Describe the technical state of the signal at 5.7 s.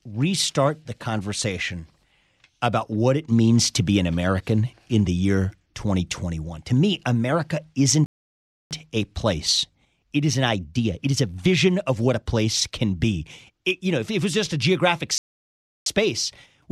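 At 5.7 s the speech signal is intact, with no technical fault present at that moment.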